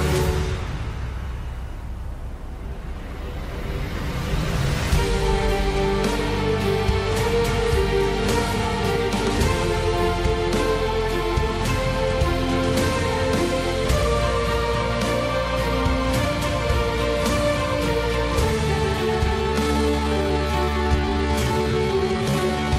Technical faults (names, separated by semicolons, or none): time-stretched section